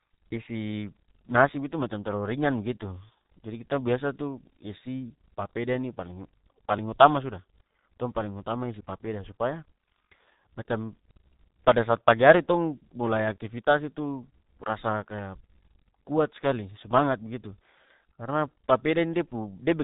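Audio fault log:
Throughout: G.723.1 codec. The speech sounds muffled and hoarse, with smeared consonants and nothing above 3.8 kHz. Heavy low-rate coding, which fits roughly 6.3 kbit/s, squeezes the voice into long 30 ms frames and a slowly updated voice model, losing detail.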